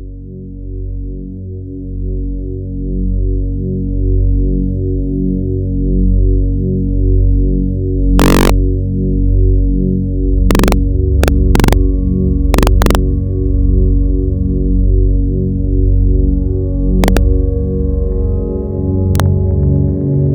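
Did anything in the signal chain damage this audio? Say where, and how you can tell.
Yes. Integer overflow occurs in a fixed-point gain or format-conversion stage. Harsh cracks occur at 8.20–8.50, 10.51–10.72, 11.24–11.73, 12.54–12.95, 17.04–17.17 and 19.15–19.20 s. Peaks up to about 2 dB over full scale wrap to the opposite sign.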